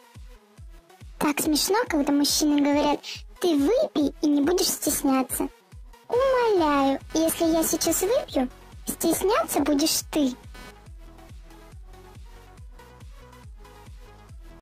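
From 6.12 s to 10.86 s a buzzy, chirping layer sits under the audio, well below it at around 25 dB down. This is computer activity noise: shifting processor or graphics load disturbs the ground the audio circuit shares, and the interference tracks the machine's work rather than the sound. On a spectrogram it shows as a comb of harmonics spaced at roughly 300 Hz; the waveform carries a fine, regular ripple of pulses across that span.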